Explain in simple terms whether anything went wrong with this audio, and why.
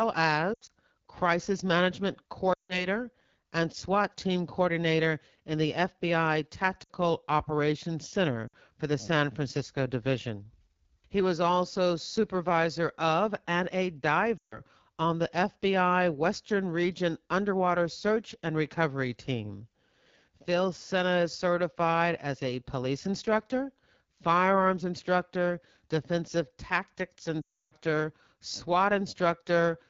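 AMR wideband (HD Voice) codec, throughout: the phone runs at one of its lowest quality settings, rebuilding speech from a simple voice model, so it sounds rough and raspy.

Lost AMR speech frames at 0.54 to 0.71 s (just before "crisis management"), 2.54 to 2.87 s (just after "crisis management"), 6.84 to 6.92 s, 8.47 to 8.55 s (before "for the"), 14.38 to 14.59 s and 27.42 to 27.75 s. Radio errors spoiled short chunks of speech, so the phone stretched out the last good sound while fading it, causing warbles and brief dropouts. The longest dropout is at 27.42 s.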